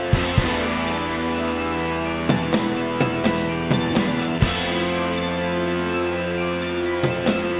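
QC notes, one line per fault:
The signal comes through a call path that is working normally, G.711 mu-law at 64 kbps, with nothing present above 4 kHz, as that narrowband coding allows.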